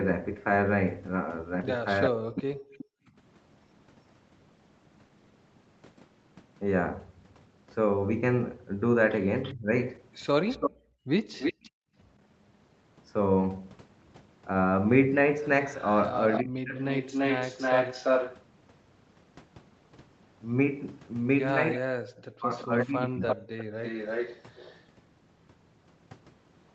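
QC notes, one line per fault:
2.05–2.85 s, 9.43–11.7 s, 15.8–18.43 s, 21.73–24.85 s: echo leak. A second copy of the voice trails the speech by about 0.34 s. It is about 10 dB down in the first and last stretches, about 5 dB down at 9.43 s, and as loud as the speech at 15.8 s. The likely cause is a loudspeaker on the far side whose echo canceller let its microphone pickup through.
2.09–2.74 s, 9.54–9.73 s, 16.42–16.76 s, 21.78–23.39 s: speech suppressed in double talk. The voice dips and breaks up where the echoed copy overlaps it. It falls by about 40 dB at the deepest, but only about 15 dB at 9.54 s. The canceller likely could not separate talker from echo, so it turned both down.
3.02–3.16 s and 10.71–11.95 s: background gated by the echo canceller. The room sound drops out, then comes back. The first dip is brief and about 13 dB deep. The second goes down about 38 dB, in pieces adding up to roughly 0.7 s. 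The canceller clamped the microphone while its loudspeaker played, then let go.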